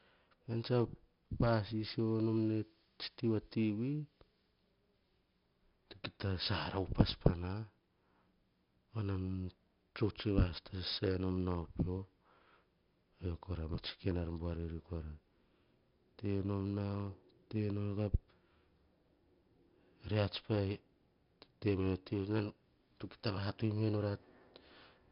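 Speech carries heavy 4-bit ADPCM compression from start to finish. A gritty hiss tracks every loud syllable, and attacks distort where the step size lags. A spectrogram shows a hard ceiling at 5.3 kHz with noise filling between harmonics, which fits roughly 44 kbps at a low sample rate.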